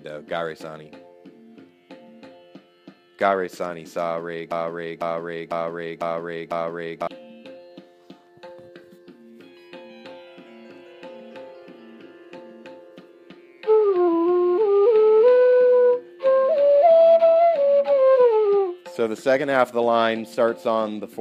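A broken-record loop runs from 4.51 to 7.07 s. A fragment of about 0.5 s plays five times in a row, each copy identical and joined directly to the next, so the sound stutters in a fixed rhythm before moving on. The likely cause is a stall in the player, encoder or stream, which kept resending the last piece it held. The audio belonging to those 2.5 seconds never plays and is lost.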